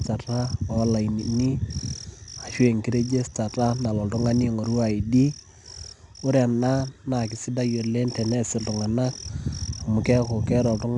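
Throughout the speech, 4-bit ADPCM compression quantises each sample as a coarse step from a predicted value, leaving a gritty, plainly audible hiss that rises and falls with loudness. Nothing reaches above 10.7 kHz, which points to a sample rate near 22 kHz and dulls the top end.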